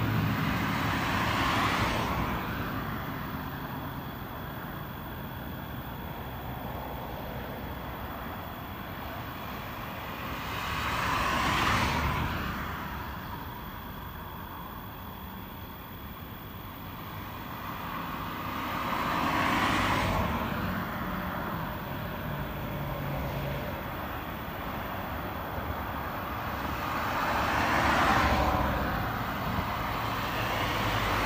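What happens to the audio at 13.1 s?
Nothing goes wrong at 13.1 s; the audio plays through that moment intact, with no dropout, click, glitch or other fault.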